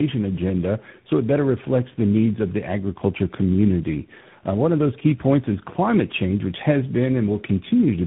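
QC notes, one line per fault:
Throughout: tandem speech coding. The speech has passed through three speech coders in a row, GSM full rate at 13 kbit/s, AMR-NB at 10.2 kbit/s and finally G.726 at 32 kbit/s, with G.711 links between them. Each coder re-encodes the previous one's errors, so the roughness, warble and muffling stack up beyond what any single codec would cause. Nothing above 3.8 kHz survives, but unlike plain band-limiting the remaining band itself sounds grainy and unstable.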